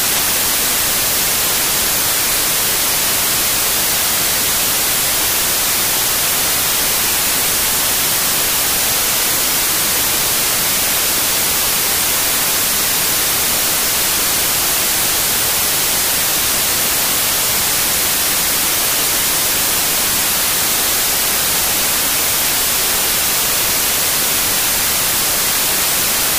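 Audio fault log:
Throughout: samples built from the wrong bytes. Each sample's bytes are combined in the wrong order or alignment, so the rapidly changing low bits become the bulk of every value, giving loud, harsh broadband noise. The spectrogram shows flat broadband energy, and the waveform is a dense block.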